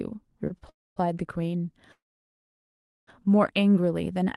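Speech sent over an Opus call path, with its band topping out near 12 kHz, has two brief held sounds at 0.47–0.52 s and 0.58–0.63 s, each stretched by about 30 ms with a slight buzz: short stalls from a late packet, where the jitter buffer ran dry and the last sound was prolonged until data arrived. Longer call audio freezes follow at 0.69–0.98 s and 1.92–3.09 s. Each is a fading buzz dropping into silence for roughly a quarter-second and over a second respectively, before speech resumes where it stopped, likely from packets held up in transit emptying the buffer.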